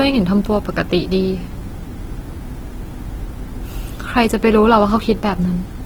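Speech with plainly audible Opus compression throughout, likely from its CELT music mode at a rate that fits about 16 kbps. Bands refilled with noise make it grainy and rough. A spectrogram shows few holes, energy smeared as noise, and content reaching about 20.2 kHz.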